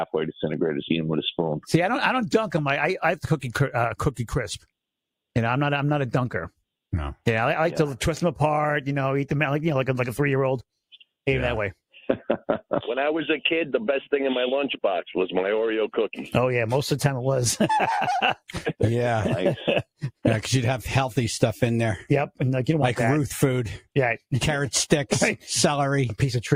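No technical faults are audible.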